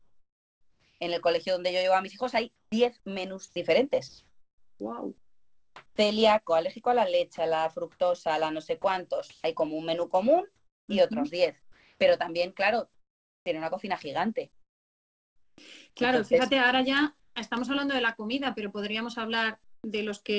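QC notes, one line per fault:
0.0–1.0 s, 17.2–17.36 s, 19.64–19.84 s: comfort noise in place of the background. The sender likely stopped transmitting during pauses, so the receiver filled them with synthetic noise. The real background, already about 47 to 49 dB below the loudest parts, becomes a flat, featureless hiss that is about 5 dB quieter (about 9 dB at 19.64 s).
2.56–5.98 s and 7.36–15.58 s: sound chopped by the voice detector. The voice detector likely toggled transmission on and off repeatedly, swapping about 1.7 s and 2.5 s of these stretches for generated noise. Quiet sounds and edges drop out, heard through the call path's 8 kHz-limited band.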